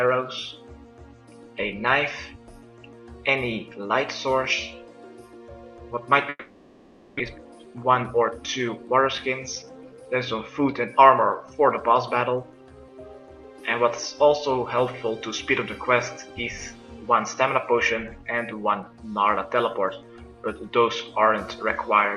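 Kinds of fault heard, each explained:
Long network dropout: from 6.29 to 7.21 s no audio arrived, likely a network outage; the receiver stretched the last sound into a fading buzz, then the lost part was skipped.
Jitter buffer speed-up: from 7.29 to 9.63 s the receiver trimmed pitch-period slices to drain backed-up audio, running about 12% fast at unchanged pitch.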